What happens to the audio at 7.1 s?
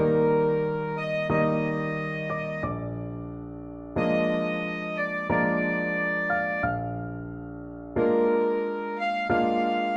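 Nothing goes wrong at 7.1 s; the audio plays through that moment intact, with no dropout, glitch or other fault.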